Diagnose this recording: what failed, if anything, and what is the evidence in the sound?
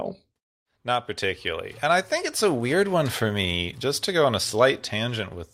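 No audible fault found.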